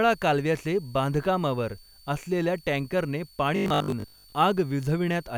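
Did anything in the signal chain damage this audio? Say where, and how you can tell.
Yes. A faint high whistle runs through the whole clip, roughly 30 dB below the speech, wandering between about 4.46 and 4.53 kHz. This is switching supply whistle in the analogue wiring or power stage: a switch-mode supply's audible ripple is coupling into the audio path.

From 3.56 to 4.32 s, right after "कालव्याचे बांधकामावर असलेल्या ट्रॅंकरने", the speech turns into a rigid metallic buzz at 50 Hz. This is robotic sound from repeated short buffers, likely at the driver or buffer stage. Starved of new audio, it replays roughly 20 ms chunks, which fits the 50 Hz buzz, while about half the real audio is skipped.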